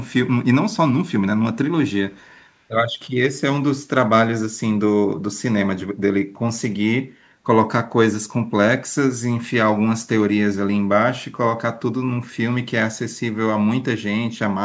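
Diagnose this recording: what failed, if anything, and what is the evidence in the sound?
From 2.11 to 2.45 s a very faint copy of the speech trails the original by about 151 ms. This is an echo leak in call processing, likely from a far-end loudspeaker whose echo canceller failed to remove what its microphone picked up, sending that residue back.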